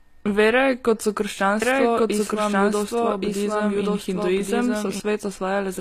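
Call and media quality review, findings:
Low-bitrate audio saved at a high bitrate, throughout. Likely cause: a low-bitrate first encode, then a re-encode to a high-bitrate MP3 that cannot restore what was lost. Symptom: the artefacts of the first codec still present across the whole clip. The larger file adds no detail back.

Doubled audio track, 1.62 to 5.00 s, starting right after "kot so". Likely cause: the same speech captured a second time through a slower path, or an edit holding two copies out of step. Symptom: a full-band copy at about the same level trails by roughly one second, with no decay or room colour, cutting in and out abruptly.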